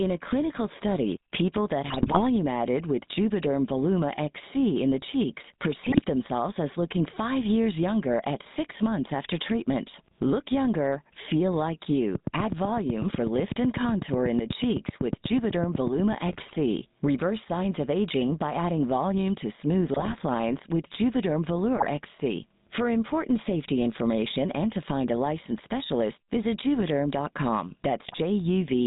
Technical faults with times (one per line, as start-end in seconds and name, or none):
0.00-28.86 gain pumping
0.00-28.86 GSM full-rate codec
1.86-2.23 GSM bit errors
5.84-6.00 GSM bit errors
12.15-16.13 train of clicks
16.28-16.57 GSM bit errors
19.94-20.15 GSM bit errors
21.76-21.87 GSM bit errors
28.06-28.20 GSM bit errors